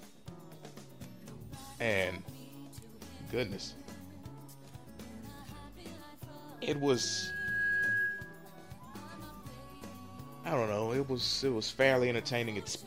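From 6.57 s to 8.54 s there is loudspeaker feedback squeal. A microphone is picking up the loudspeaker it feeds, and at 1.6 kHz the loop gain has gone past unity, so that frequency reinforces itself on every pass. It is heard as a single tone that swells over roughly a second until it sits around 5 dB above the rest of the sound, then stops at 8.54 s.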